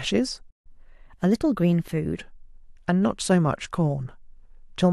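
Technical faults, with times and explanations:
0.50–0.67 s, playback stall: The speech cuts out mid-flow and the output goes fully silent for about 151 ms. It simply stops, then resumes. The likely cause is the player running short of buffered data, or its playback thread being briefly blocked. With nothing to send to the output, it produces silence until data flows again and playback picks up.
0.67–2.18 s, catch-up at higher speed: Right after the gap, the speech runs fast, at 1.1 times normal speed. Pitch rises with it, by roughly one and a half semitones, so the voice sounds slightly higher and hurried. The player is resampling its backlog to recover the time lost in the stall. Speed and pitch are tied together in this kind of resampling. At 2.18 s both drop back to normal.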